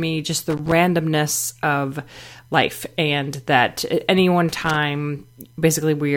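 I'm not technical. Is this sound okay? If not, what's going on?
No, there are two short bursts of loose connector crackle in this speech, from 0.50 to 0.72 s and again from 4.49 to 4.76 s. A worn or dirty plug contact is flickering on and off, chopping the sound into scratchy crackle.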